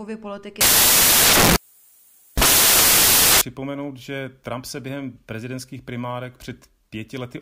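From 0.61 s to 3.41 s the speech is buried under a loud hiss like white noise. These are samples built from the wrong bytes. The reader assembled each sample with its bytes misaligned or in swapped order, so the rapidly fluctuating low-order bits landed in the most significant position and now dominate every value, turning fine detail into loud noise.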